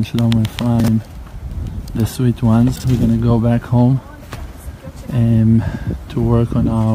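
Chunks out of order at 0.80 to 0.88 s and 2.76 to 2.84 s: two 40 ms chunks swap places, so the sound briefly jumbles across three hard joins.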